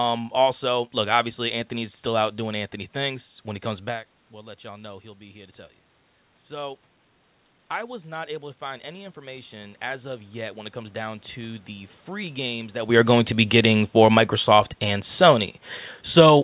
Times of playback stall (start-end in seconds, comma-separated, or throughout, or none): none